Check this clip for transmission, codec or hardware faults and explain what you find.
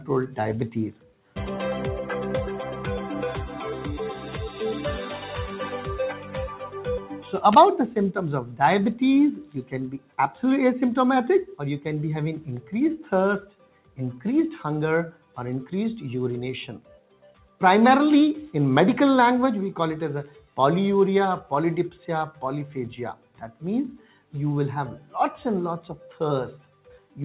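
The problem is in processing: a noise suppressor built for speech stayed active on non-speech sound, in a call path whose G.711 A-law style band limit removes everything above 4 kHz.

Noise suppressor applied to music or sounds, throughout: the suppressor treats steady tones, ambience and decays as noise and lowers them, with gain swinging by roughly 10 dB. Onsets survive while sustained parts sink, so the sound pumps and thins.

Sound cut by the noise suppressor, at 0.0 to 1.36 s, 6.15 to 10.18 s, 12.61 to 17.61 s, 20.28 to 20.57 s and 22.32 to 27.17 s: here it pushes material down by up to about 12 dB (about 11 dB at 20.28 s), for around 0.3 s to two seconds within each span. Held sounds dip and tails are cut short.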